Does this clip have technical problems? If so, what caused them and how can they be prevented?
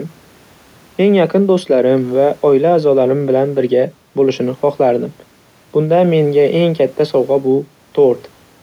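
No, there are no technical problems to hear in this speech recording. With nothing going wrong, there is no cause to trace and nothing that needs preventing.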